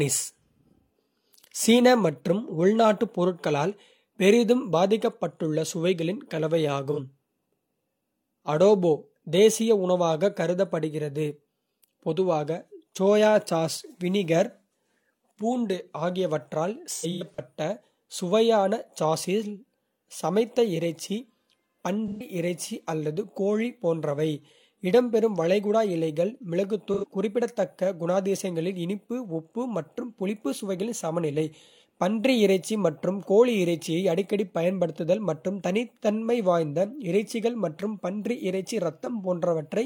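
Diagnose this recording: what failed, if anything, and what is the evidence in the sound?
Codec stage: AAC frame loss with concealment at 6.92, 16.93–17.39, 22.08–22.26 and 26.93–27.04 s, smeared, phasey patches where the decoder repeated the last good spectrum.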